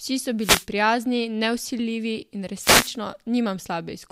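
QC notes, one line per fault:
0.39–0.66 s, wireless microphone noise hit: a short swish of static sits over the speech, ending just before "prijazni nevsiljivi in". The FM radio link faded as reflected paths cancelled, so receiver hiss rose over the signal.
2.56–2.96 s, wireless microphone noise hit: a longer burst of static follows "prijazni nevsiljivi in". The FM radio link faded again, so receiver noise rose over the speech until reception recovered.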